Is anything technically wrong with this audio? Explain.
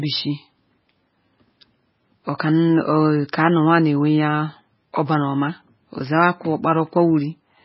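Yes. MP3 compression runs throughout the speech, likely the cause of the damage. Nothing is heard above 5.5 kHz, where the encoder cut the treble to save bits, so the sound is dull and muffled. The heavy starving of bits also zeroes weak frequency lines that switch on and off between frames, giving a watery, swirling texture, metallic chirps on s sounds, and smeared consonant attacks. This fits a very low bitrate near 16 kbps.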